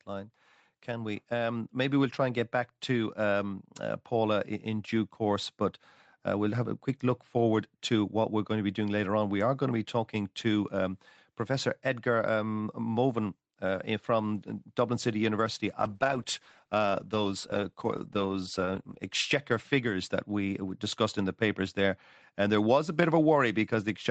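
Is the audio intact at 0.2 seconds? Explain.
No. From 0.05 to 4.95 s the voice and background swell together by about 6 dB: automatic gain rising, as the gain control slowly lifts a level it judged too quiet.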